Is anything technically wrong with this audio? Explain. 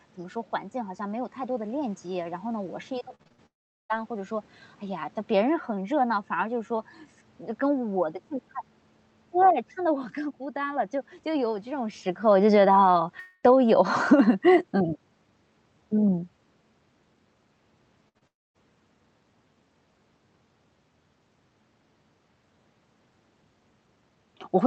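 Yes. This speech clip has several network and level faults, mostly clustered around 3 s and 18 s.

Repeated packet loss (robotic sound), 2.99 to 3.40 s. Over this stretch packets went missing six times in quick succession, the longest gap about 62 ms. Each hole was patched by extending the preceding sound, and the next loss arrived before the audio could settle. Roughly 43 percent of the span is synthetic fill, about 174 ms in total. The result is choppy, metallic and robotic, with pieces of speech gone.

Long network dropout, at 3.46 to 3.91 s, 13.19 to 13.45 s and 18.27 to 18.56 s. In each window the audio briefly continues as a fading buzz or hiss, then gives way to a stretch that carries nothing new. That stretch is about 0.4 s of near-silence in the first and 0.26 s in the third. The middle one, about 0.23 s, is filled throughout with no silent part. Speech then resumes further on with the lost portion missing. 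This is likely a loss of incoming audio that concealment could only cover for a moment.

Automatic gain falling, 11.26 to 16.30 s. The gain control judged the input too loud or its background noise too strong and pulled its gain down gradually by about 9 dB. Voice and background noise sink together over these five seconds. This overlaps a change in level around 12 s that comes from the talker moving relative to the microphone, and that change is not itself a fault.

Burst of packet loss, 18.09 to 18.17 s. About 60 ms of consecutive audio never arrived in time. The receiver carried the last sound forward and faded it, leaving a held buzz or fading hiss before the speech picks up again with that slice gone. It leads straight into the events below.

Short concealed packet loss, at 18.19 to 18.23 s. Around 20 ms was lost and covered by about 26 ms of extrapolated sound blended back into the real signal. 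It comes across as a brief smear or wobble, sandwiched between the burst just before it and the dropout that follows.

Throughout, the call codec limits the top end to 8 kHz, which fits an Opus stream at around 32 kbps.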